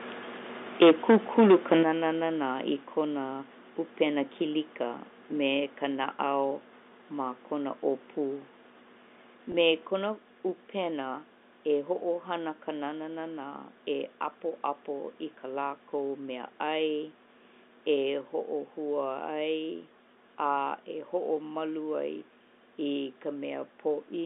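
From 0.81 to 1.74 s the loudest peaks sound flattened and crackly, likely microphone overload pushing about 9 dB past the converter's limit with around a tenth of samples clipped. The distortion rides only the peaks, not the whole signal.

At 0.83, 1.83, 2.85, 9.87 and 18.18 s, voice and background drop together in single steps of about 2, 8, 2, 3 and 2 dB. This is microphone volume stepped down, likely by the call software's automatic gain control. Each is an abrupt step rather than a gradual fade.

At 9.52 s a 20 ms gap, which fits one lost packet, is bridged by packet loss with pitch repetition. It is heard as a brief held, buzzy note instead of a click or silence.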